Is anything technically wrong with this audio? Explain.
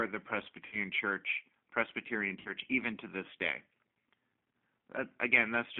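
Yes. The whole speech clip sounds narrow, slightly rough and synthetic, with nothing above about 3.5 kHz or below about 150 Hz. That is the G.729 codec at 8 kbit/s: the decoder rebuilds each 10 ms frame from a vocal tract filter, a pitch predictor and a few pulses, so fine detail is lost and the telephone band cuts off the highs. The damage is plainly audible across the recording.

At 0.66 to 0.76 s, and again at 2.39 to 2.50 s just before "even to this day", the sound smears into a buzzy tone or coloured noise that fades. This is VoIP packet loss concealed by the speech codec: about 60 ms of audio went missing in each gap, and the decoder stretched its last pitch and filter, lowering the gain frame by frame; once real packets resumed, the voice stayed weak or distorted for tens of milliseconds or more before it recovered.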